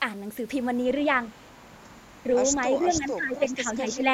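A speech recording with two kinds of fault. The first is an echo leak. A faint, delayed copy of the voice appears briefly from 1.42 to 1.47 s, then again from 2.94 to 2.98 s. It trails the original by 342 ms. The first scrap is very quiet, around 40 dB below the speech. The second is clearer, around 25 dB down. This is likely a far end on a loudspeaker whose echo canceller let part of its microphone pickup return. The second fault is speech suppressed in double talk. Between 2.71 and 4.11 s the voice repeatedly dips and thins. In total about a second of it is affected. The deepest drops reach roughly 15 dB. The echo scrap at 2.94 s falls inside this stretch. That points to both sides talking at once. The likely cause is a canceller that could not tell the talker from the returning echo and turned both down.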